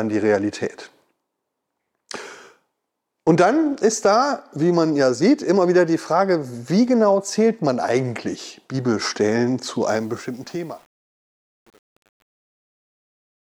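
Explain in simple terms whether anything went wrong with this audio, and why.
Yes, something went wrong at the end. The speech fades out from around 10 seconds to the end at 13.5 seconds. But from 9.88 seconds it picks up truncation distortion on a fade. The volume stage keeps too few levels of loudness, which fits an 8-bit stage with no dither. As the sound gets quieter, it falls into coarse steps. From 10.17 seconds to the end, it sounds gritty.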